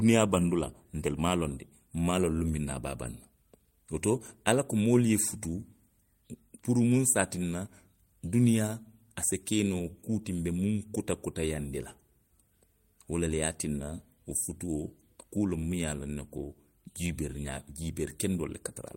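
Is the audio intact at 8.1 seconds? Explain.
Yes, at 8.1 seconds the speech plays through cleanly, with no dropout, click, distortion or other fault at that moment.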